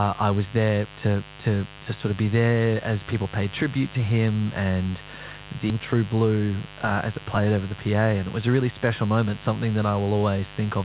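Mains buzz runs through the whole clip: switching spikes on the 50 Hz supply leak in as a raspy harmonic buzz, around 20 dB below the speech, inside a call band that stops at 4 kHz, which fits G.711.

A skip ahead at 5.70 to 5.72 s drops roughly a second of speech. Playback jumps straight to later, already-buffered audio with no gap filled in.

A jitter buffer speed-up from 5.80 to 6.67 s, ending just before "uh as it played", trims repeated pitch-period slices, about a tenth of a second in all. The speech runs 9% faster at unchanged pitch and sounds hurried.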